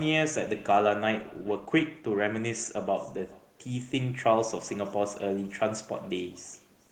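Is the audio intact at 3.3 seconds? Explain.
No. At 3.3 seconds, as everywhere in this speech clip, there's an echo with no canceller running the whole way through. The far end is playing the call over a loudspeaker, its microphone picks that back up, and nothing strips it out, so the talker returns after the network round trip. Each bit of speech gets trailed, around 400 ms later, by a faint, thin copy about 27 dB down.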